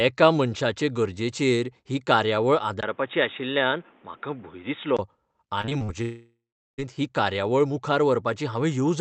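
From 2.81 to 4.99 s, the sound turns boxy after a 20 ms silence, likely an input switched to a poorer device: nothing above 3.8 kHz and faint new noise, but the level stays about the same. Between 5.61 and 5.90 s, repeated packet loss makes the sound choppy and robotic, with several short patched gaps (the longest 37 ms) rather than one continuous hole. From 6.02 to 6.80 s, a long network dropout is likely: the last sound is stretched into a fading buzz, then about 0.39 s of silence follows before the audio resumes with that stretch missing.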